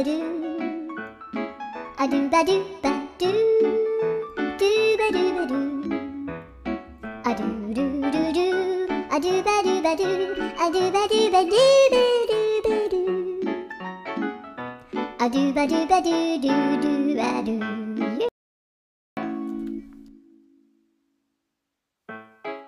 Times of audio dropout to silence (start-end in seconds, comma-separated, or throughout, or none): 18.29-19.17